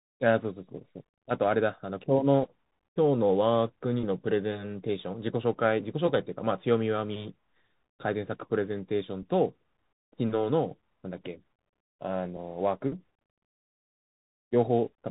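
Throughout the speech, the audio is carried by a Bluetooth CVSD headset codec, a one-bit delta modulator whose adaptive step size lags fast changes, which fits a 64 kbit/s link. Nothing above 3.8 kHz survives, s sounds turn scratchy, and granular hiss sits underneath.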